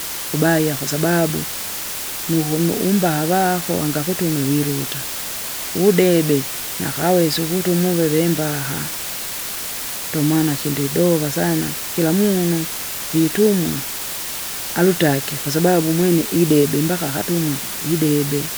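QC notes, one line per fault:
Throughout: low bit depth with dither. A constant, even hiss sits only about 10 dB below the speech, present at every moment, pauses included. The noise floor points to a signal resolved to around 5 bits. Dither was added before rounding, so the coarse quantisation error is spread into steady broadband white noise rather than distortion tied to the signal. The speech therefore stays clean in shape but overlaid with hiss.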